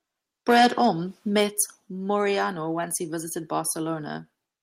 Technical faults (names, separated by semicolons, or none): microphone overload; microphone volume stepped down